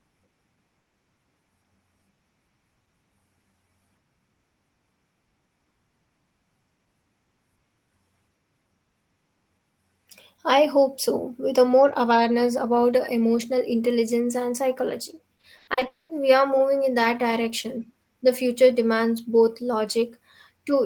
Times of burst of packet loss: 0.79-0.95

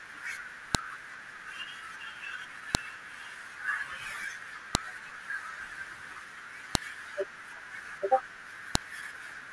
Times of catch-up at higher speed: none

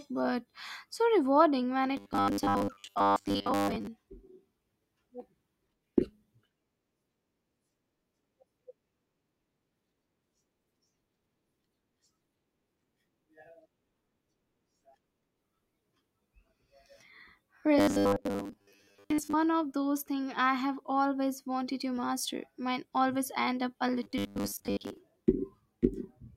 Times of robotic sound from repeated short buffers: 1.97-3.87, 17.78-19.33, 24.03-24.98

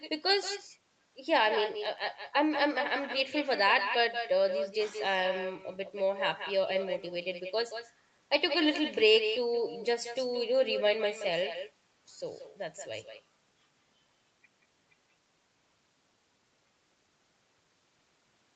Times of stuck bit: none

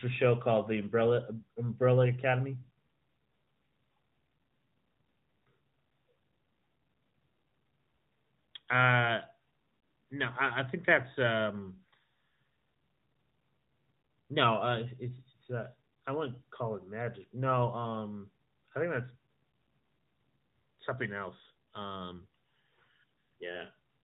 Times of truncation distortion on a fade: none

